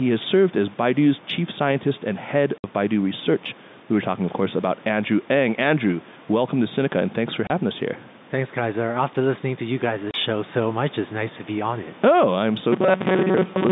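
Gain pumping runs through the whole recording, with the level swinging by roughly 5 dB. This is most likely an input gain set far too high, with a fast limiter pulling it back on each loud sound, which also squashes loud and soft parts together. Ordinary room noise holds steady, while pumping makes the background breathe in step with the speech. That separates pumping from the room's own background.

Packet loss filled with silence cuts the speech three times. The first gap is 60 ms long, from 2.58 to 2.64 s, just after "chief scientist and head". The second runs from 7.47 to 7.50 s, between "and thanks for" and "us here". The third runs from 10.11 to 10.14 s, between "listening to you" and "show so much it's". Both of the later gaps are 30 ms. The lengths fit lost 30 ms packets, one or two at a time, with nothing played in their place. Each hole is truly silent, with abrupt edges. In a concealed loss the sound would be smeared or repeated instead.

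Robotic sound from repeated short buffers takes over from 12.72 s to the end. The sound hardens into a rigid, metallic buzz at 188 Hz. It still roughly follows the speech. The likely cause is audio arriving too seldom, so the software loops about a 5.3 ms slice and skips most of the real signal. Packet loss leaves silent holes, but this fault fills time with repeats. The fixed pitch also sets it apart from the faint level-following noise of the G.711 line, which itself sounds normal within its narrow band.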